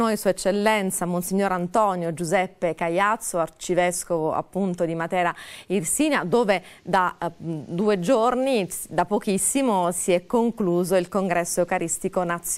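Nothing in the audio points to a technical fault. The sound holds steady throughout, with no event that needs a time or a cause.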